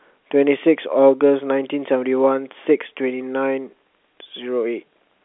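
No technical faults can be heard in the speech. It comes over a normal G.711 A-law telephone path at 64 kbps, so the sound sits in a 300 Hz to 3.5 kHz line band with nothing above 3.8 kHz, and the coding leaves at most a faint trace.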